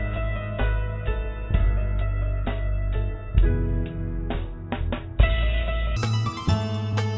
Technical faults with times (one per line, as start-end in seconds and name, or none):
5.96-7.17 wrong sample rate